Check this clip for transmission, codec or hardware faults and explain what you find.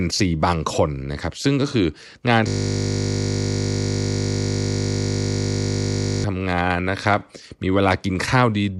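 One fault is present. From 2.48 s to 6.24 s the speech gives way to a steady, flat 50 Hz buzz. This is a system hang loop: the computer or driver froze while the audio hardware kept replaying the same 20 ms slice of its ring buffer, fifty times a second.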